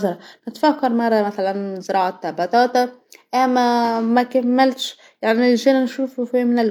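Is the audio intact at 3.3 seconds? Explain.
Yes, the speech at 3.3 seconds is intact, with nothing to be heard there that breaks or disturbs the sound.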